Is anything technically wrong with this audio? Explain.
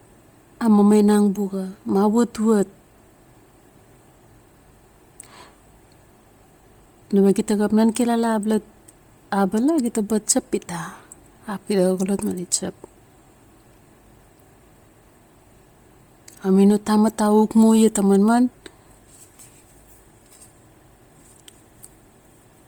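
Yes. Throughout the speech, the upper spectrum sounds thinned and replaced with noise, most likely from heavy Bluetooth LC3 compression at a rate near 32 kbps with 10 ms frames. This gives the voice a breathy, grainy edge, although content still reaches about 20.1 kHz.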